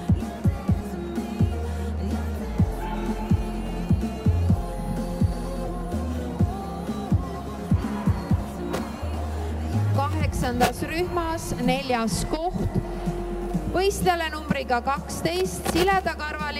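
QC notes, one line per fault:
No technical faults are audible at any point, and the signal stays intact and consistent throughout.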